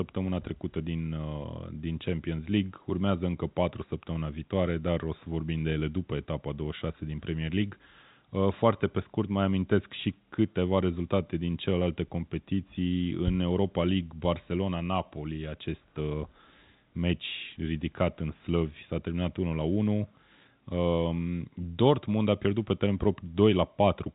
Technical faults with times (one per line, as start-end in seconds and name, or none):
none